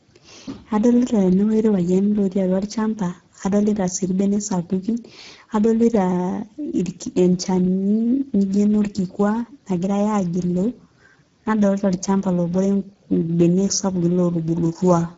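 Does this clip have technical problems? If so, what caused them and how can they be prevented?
Yes. Speex codec damage runs throughout the speech: it sounds plainly hoarse and noisy, which fits a bitrate near 9.8 kbps, and nothing is present above 7.5 kHz. Unlike MP3's warbling, the upper band here is only a shaped, hissy fill. To prevent it, encode at a higher Speex quality setting or use a modern codec such as Opus.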